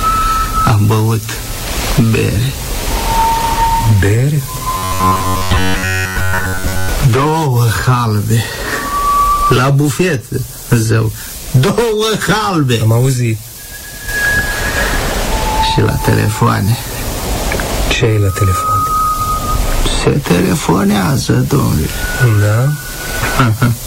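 From 4.77 to 6.89 s the audio turns into a rigid, metallic buzz at about 93.8 Hz: robotic sound from repeated short buffers. The likely cause is audio arriving too seldom, so playback loops a block of roughly 10.7 ms, the period of that buzz, while most of the real signal is skipped. A waveform would show identical blocks repeating every 10.7 ms, and a spectrogram a comb of evenly spaced horizontal lines at multiples of 93.8 Hz.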